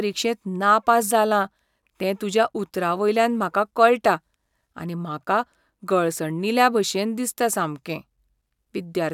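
Nothing in this recording of speech points to a technical fault; the signal stays steady and unbroken throughout.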